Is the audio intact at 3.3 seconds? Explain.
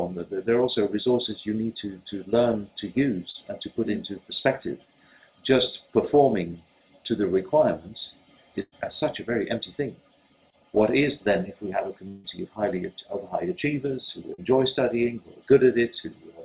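No. From 3.30 to 3.36 s there is a short concealed packet loss: about 40 ms of the stream arrived too late for the decoder, and the receiver synthesised 38 ms to cover the gap by extending the preceding sound, pitch-based if it was tonal and shaped noise if not, before crossfading back into the real signal. It comes across as a brief smear or wobble.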